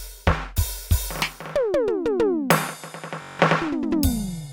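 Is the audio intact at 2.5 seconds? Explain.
Yes, the music plays through 2.5 seconds without any audible dropout, click, distortion or other break.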